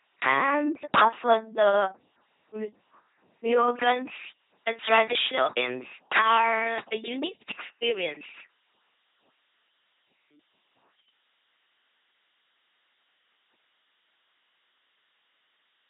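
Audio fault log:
Throughout: LPC-10 vocoder. Speech sounds buzzy and robotic, with every instant rendered fully voiced or fully hissed. Nothing is present above 3.9 kHz, consistent with 2.4 kbit/s coding.
3.52–15.89 s: pre-emphasis left on. Treble rises sharply, about 11 dB at 10 kHz over 1 kHz, fitting an uncorrected J.17 boost. Speech turns thin and sibilant.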